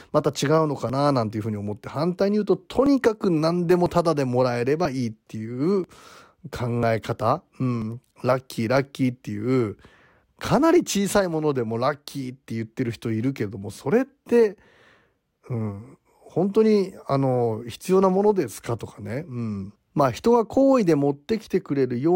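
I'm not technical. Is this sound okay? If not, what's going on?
No. There are tiny clicks, or skips, at 0.90, 1.89, 2.86, 3.86, 4.85, 5.84, 6.83 and 7.82 seconds, about once a second. This is overlap between stream segments: consecutive one-second pieces overlap slightly, and the player trims that overlap from the speech, cutting out 5 to 17 milliseconds. Unlike a dropout, there is no silent gap, just a jump.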